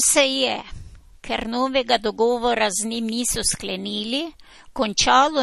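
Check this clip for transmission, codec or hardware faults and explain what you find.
One fault is present, spanning the whole speech clip.

MP3 compression, throughout: a likely bit-starved encoder, around 40 kbps, removes everything above 12.5 kHz and drops weak frequency lines, sounding plainly watery and smeared.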